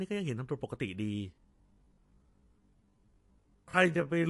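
From the start, the speech has a hard treble ceiling at 11.2 kHz and a plainly audible watery, swirling texture with metallic chirps on s sounds, likely MP3 compression at a low bitrate near 48 kbps. A spectrogram shows an empty band above 11.2 kHz and flickering, patchy high-frequency blocks.

At 1.3 s the pace abruptly drops to about 0.58 times normal speed, with unchanged pitch, through the end. The likely cause is a time-stretched section. It sounds dragging, and the waveform shows elongated, repeated segments without a shift in harmonic spacing.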